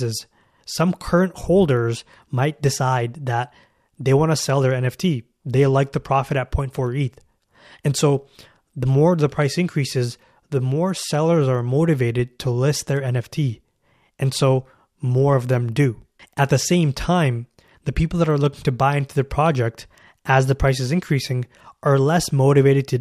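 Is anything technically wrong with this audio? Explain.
No, nothing technically wrong stood out on listening to this speech recording.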